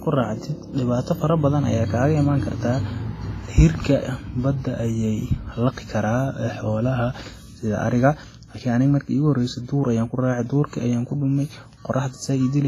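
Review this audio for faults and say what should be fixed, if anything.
Heavy compression damage runs through the whole speech clip, most likely WMA compression. The encoder's long transform blocks smear quantisation noise across tens of milliseconds, so the speech rings and sounds washy, with a hiss that swells and fades with the signal and nothing above 15.3 kHz. The damage is this heavy and smeared, which fits a low bitrate near 24 kbps. Unlike broadband noise, the hiss tracks the speech rather than sitting steadily underneath it. Keep the uncompressed source, or encode at a much higher bitrate.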